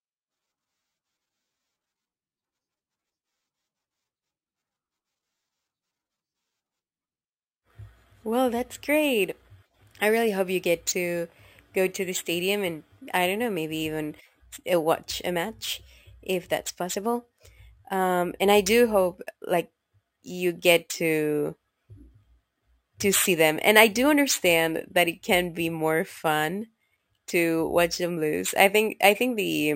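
The speech carries imaging from sample-and-hold upsampling throughout. Samples repeated from 22 kHz to 44.1 kHz leave a metallic fizz at 11 to 22 kHz, about 18 dB below the speech.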